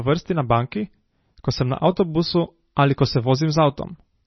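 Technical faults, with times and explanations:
Throughout: MP3 compression, likely, and heavy. Nothing survives above 5.9 kHz, so the speech sounds dull. Weak frequency lines flicker on and off between frames, giving a watery, swirly texture, and the damage points to a low bitrate near 24 kbps.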